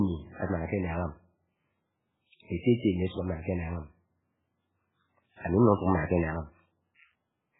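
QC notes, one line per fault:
Throughout, MP3 compression: heavily watery, swirly speech with nothing above 3.8 kHz, likely an MP3 encode starved of bits, fitting about 8 kbps.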